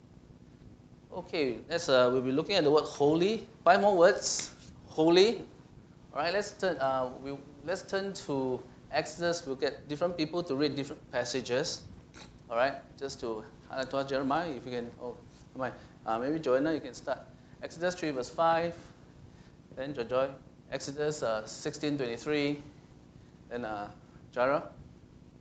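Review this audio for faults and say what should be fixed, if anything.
Nothing stood out on listening that needs fixing, and the top end stopping at about 8 kHz is simply what the call path's codec does at this setting.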